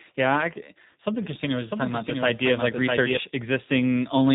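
From start to finish the speech has passed through the G.729 codec, at a rate that fits 8 kbit/s. Rather than storing the waveform, the encoder has reduced each 10 ms stretch to a vocal tract filter, a pitch predictor and a handful of pulses, and the decoder has rebuilt the speech from those. Nothing above 3.8 kHz survives, so the speech sounds narrow and telephone-like, with a plainly audible rough, synthetic edge.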